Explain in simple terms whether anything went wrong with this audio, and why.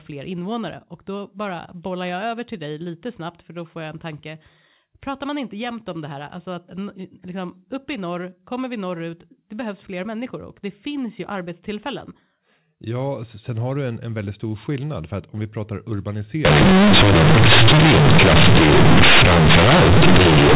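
Something does go wrong near the end. From 16.45 s, right after "att om vi pratar", the sound turns into harsh, buzzy, very loud distortion, with heavy noise even in the gaps, and it stays that way to the end. That's companded audio read as linear: the telephone-style mu-law bytes get played as plain 8-bit samples without being expanded back, so quiet bits blow up as big as loud ones. Before that point the usual narrow telephone sound comes through.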